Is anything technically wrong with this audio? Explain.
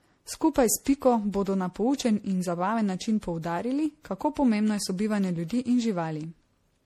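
Yes. Throughout the speech there is generation loss. The sound is swirly, smeared and hollow, consonant attacks are blurred, and nothing remains above 16.9 kHz. The likely cause is repeated lossy re-encoding, fitting a 64 kbit/s MP3 chain run around seven times. Each pass requantises on a shifted frame grid, so noise and spectral holes pile up. A single encode at that rate would sound cleaner; the extra swirl and hollowness come from the accumulation.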